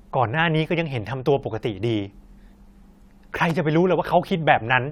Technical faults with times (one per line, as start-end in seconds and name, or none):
3.50 electrical switching spike